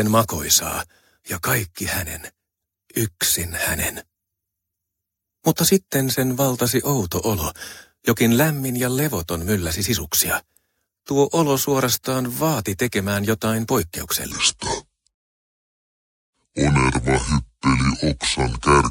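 From 14.32 s to the end, the speech drops into a section at the wrong speed, playing at 0.631 times normal, roughly seven semitones low, deep and dragging, likely from a clock mismatch.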